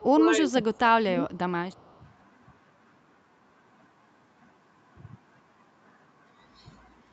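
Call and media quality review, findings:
Speech suppressed in double talk, 0.0 to 1.25 s and again 1.76 to 1.82 s: echo canceller likely mistook overlapping far-end speech for echo and attenuated the near-end talker. Speech dips by about 20 dB, roughly 0.7 s affected; second dip about 15 dB.

Echo leak, 1.72 to 1.99 s: likely residual loudspeaker pickup passing the echo canceller unremoved and returned down the line. A faint delayed copy of the speech trails about 214 ms behind, at about 40 dB below the direct signal.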